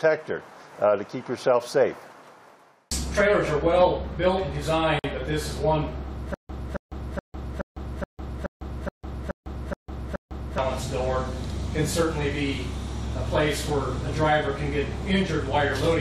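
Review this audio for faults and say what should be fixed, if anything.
Two pieces of the audio were encoded separately and then joined without trimming, so the encoder's start-up delay and the padding on the last frame both remain at the seam. This gap at a join of encoded pieces shows up from 4.99 to 5.04 s as a silence of about 50 ms that cuts into continuous sound. Its edges are smeared by the codec, and the sound then resumes exactly where it stopped. To prevent it, trim each piece's encoder delay and padding before joining, or encode the material as one continuous stream.

From 6.34 to 10.58 s the playback or stream likely stalled repeatedly, and on each retry it replayed the last buffered fragment before running dry. The result is a stutter with silent gaps. The same burst of about 272 ms returns ten times at a steady period of about 424 ms, and each repeat is followed by roughly 152 ms of digital silence. 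Whatever should have played during that stretch is lost. To prevent it, give the player enough buffering and a recovery path that waits for fresh data instead of looping the stale fragment.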